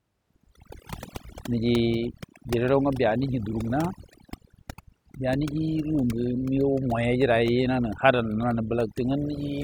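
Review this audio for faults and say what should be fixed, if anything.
A noise reduction stage set far too aggressively processed this speech recording from start to finish, the fault known as overdone noise removal. Treating every frequency band that sits close to its noise estimate as disposable, it pulls those bands down hard or mutes them outright, taking the softer parts of the voice along with the noise. Across the whole clip the background drops and breaks up into twinkling specks. To prevent it, lower the reduction strength until the voice keeps its body and a little natural background noise remains audible.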